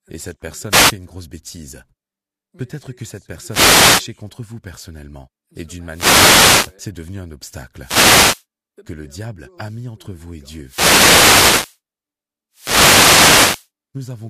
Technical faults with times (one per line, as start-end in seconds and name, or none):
0.69-0.94 wireless microphone noise hit
3.46-4.09 wireless microphone noise hit
5.89-6.76 wireless microphone noise hit
7.80-8.45 wireless microphone noise hit
10.62-11.79 wireless microphone noise hit
12.52-13.69 wireless microphone noise hit